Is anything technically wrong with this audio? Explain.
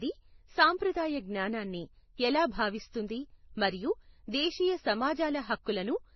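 Yes. Throughout the speech, nothing is heard above 6 kHz. Two kinds of artefact sit on top of each other. The likely cause is transcoding between lossy codecs: a low-rate Vorbis encode, then an MP3 encode. The MP3 stage spent bits on the Vorbis artefacts and added its own.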